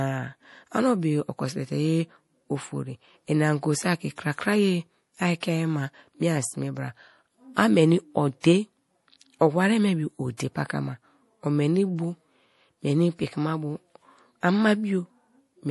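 Throughout the speech, nothing sounds above 11.5 kHz and the top sounds swirly and watery, plainly audible MP3 compression, likely from a low bitrate near 48 kbps. Unlike a simple low-pass, weak components flicker between frames. Pre-echo occurs at 5.40–5.43 s just before "ma miean sme bra", at 8.40–8.44 s after "a meni", and at 10.37–10.40 s after "me bio". A brief hiss of 23–31 ms leads each attack as block-spread quantisation noise, unlike a click, which has no lead-in.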